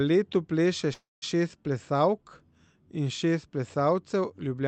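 Speech passed through a WebRTC call path with an 8 kHz bandwidth limit, showing a call audio freeze at 0.93–1.24 s: a fading concealment tail, then about 0.19 s of silence, likely from delayed packets draining the jitter buffer, with the speech then resuming intact.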